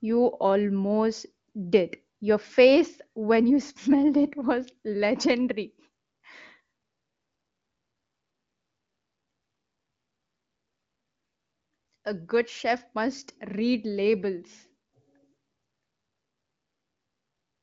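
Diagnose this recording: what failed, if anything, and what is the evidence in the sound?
Nothing failed: the speech comes through a wideband phone path with its top end stopping near 7.6 kHz, consistent with an HD Voice codec at a high rate, and no stage shows a fault.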